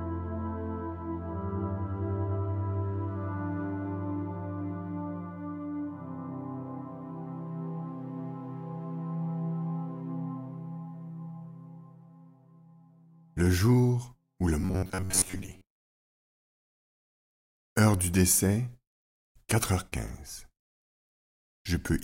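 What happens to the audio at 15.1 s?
Robotic sound from repeated short buffers runs from 14.61 to 15.66 s as a rigid metallic buzz near 94 Hz, likely from about 10.7 ms segments replayed in place of most of the missing audio. The waveform shows identical repeating cycles, and a spectrogram shows evenly spaced horizontal harmonics.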